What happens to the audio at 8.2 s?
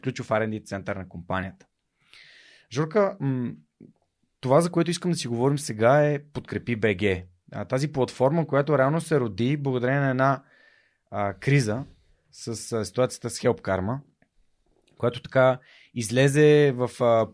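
Nothing goes wrong at 8.2 s; the speech carries on intact through that moment, with no dropout, click or other disturbance to be heard.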